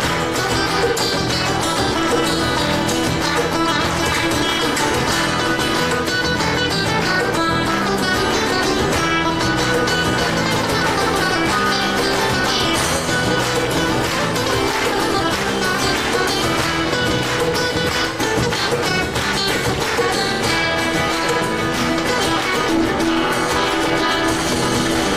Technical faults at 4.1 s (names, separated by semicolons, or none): overlap-add ripple